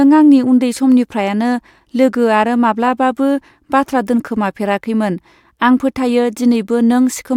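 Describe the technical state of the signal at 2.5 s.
At 2.5 s the signal is intact, with no dropout, clipping, glitch or other audible fault.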